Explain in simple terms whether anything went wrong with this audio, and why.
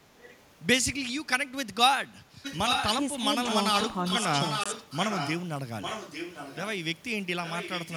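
Two things went wrong. The far end's echo canceller likely let its loudspeaker sound leak back. This echo leak returns the speech about 850 ms late, at 0.2–0.36, 2.43–2.88, 3.42–3.57, 3.73–5.43, 5.81–6.62 and 7.44 s to the end. It is faint at first and as loud as the speech itself around 2.43 s.

A Bluetooth dropout also likely occurred: one late packet was thrown away, which fits the length of the gap. The sound goes silent for about 20 ms at 4.64–4.66 s, then carries on as if it had kept playing.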